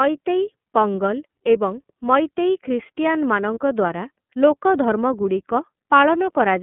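Across the whole recording the speech has passed through the iLBC codec, and the damage is plainly audible. The line band runs from 150 Hz to 3.4 kHz, so the voice sounds thin and boxed-in, with a faintly rough, synthetic buzz where each frame's excitation is coded from scratch. That behaviour fits 30 ms frames at around 13.33 kbps. On a spectrogram, energy stops abruptly at 3.4 kHz with an empty band above, and the low end is trimmed below 150 Hz.

From 3.54 to 3.58 s there is a lost iLBC frame. The decoder had nothing to play, so it repeated the last pitch cycle blended with noise, and the gap sounds like a brief held, slightly buzzy vowel. The length fits one missing 30 ms frame. Because each iLBC frame decodes on its own, the speech is back to normal right after. In the waveform this shows as a short run of near-identical repeating cycles. On a spectrogram it appears as flat, unchanging harmonics smeared with noise.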